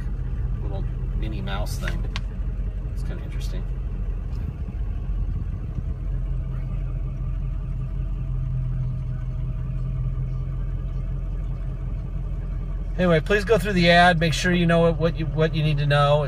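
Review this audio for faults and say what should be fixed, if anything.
Nothing audible needs fixing; no faults were heard.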